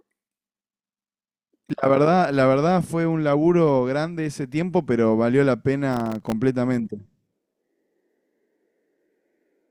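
Processor overload crackle tears through the speech from 1.31 to 1.70 s and from 5.91 to 6.32 s. Very short buffers miss their deadlines, leaving tiny silent gaps that sound like gritty bursts.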